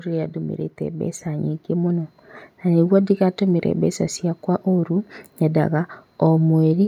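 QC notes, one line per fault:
0.78–2.92 s, automatic gain rising: the speech and the background noise under it swell together, slowly climbing by about 6 dB over roughly two seconds, settling just before "ndĩgatũmĩre mbeca ciakwa ũrũ". The gain control judged the input too quiet and raised its gain gradually.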